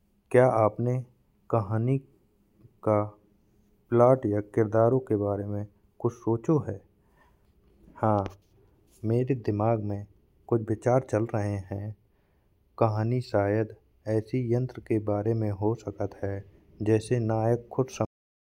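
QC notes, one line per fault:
18.05–18.49 s, cut-off end: the speech stops dead mid-sound at 18.05 s and falls straight to digital silence for the last 0.43 s, with no natural decay. The final buffers never got written or played out, so the recording simply ends there.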